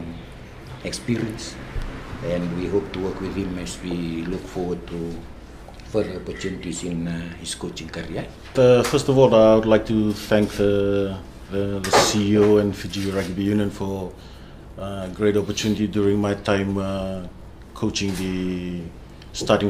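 No technical faults can be heard anywhere in the audio.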